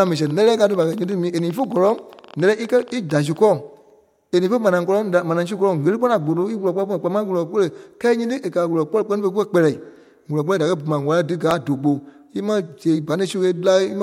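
Speech opens with a train of clicks from 0.07 s to 3.38 s. About forty similar pops arrive at an uneven pace, near 10.9 per second, reaching roughly the level of the speech itself. They tick through pauses too. Nearby electrical interference or a faulty connection or power supply is the likely cause.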